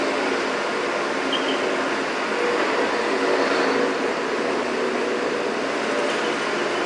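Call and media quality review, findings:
No faults found in this everyday-sound recording. Nothing to escalate to capture, network or playback components.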